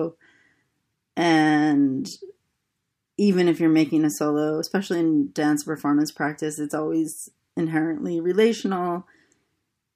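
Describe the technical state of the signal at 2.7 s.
At 2.7 s the speech signal is intact, with no dropout, distortion, glitch or other audible fault at that point.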